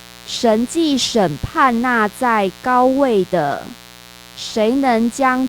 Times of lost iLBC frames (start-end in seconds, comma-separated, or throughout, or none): none